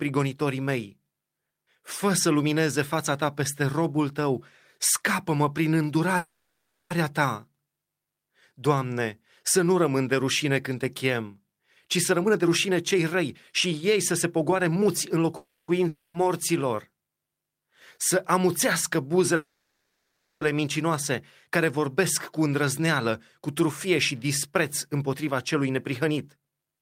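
At 6.17 s the speech stops advancing and the last sound is stretched into a buzzing tail that fades over 0.73 s, a call audio freeze, likely from packets stalling until the jitter buffer ran dry. Nothing is lost: the audio resumes where it halted, now later. On a spectrogram the harmonics flatten into horizontal smears that dim toward 6.92 s, and the waveform shows a decaying repetitive pattern instead of speech.

From 11.60 s, right after "rușine când te chem", to 15.20 s, a jitter buffer speed-up runs the speech at about 117% while the pitch stays put, making it sound hurried. The receiver, likely draining a backlog, snipped out pitch-period-sized pieces repeatedly, roughly 0.7 s in total. The waveform shows compressed syllable spacing without broken cycles, and the spectrogram's harmonic spacing stays unchanged.

A second freeze fills 15.37 to 15.70 s with a fading buzz, again likely a stalled stream.

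At 15.88 s a long network dropout begins. A fading buzz covers 0.26 s until 16.16 s, and that audio, likely lost in transit, never returns. The speech resumes with a jump in content, and the spectrogram shows a smeared tail ending at an abrupt onset.

Between "să amuțească" and "mincinoase care", from 19.36 to 20.43 s, a 1.05 s call audio freeze, likely another stall, smears and fades the last sound before the speech continues intact.

Speed-ups return after "mincinoase care", at about 106% from 21.77 to 24.53 s and about 110% from 24.93 s to the end. Each removes roughly 0.2 s, most likely to shed the delay the freezes built up.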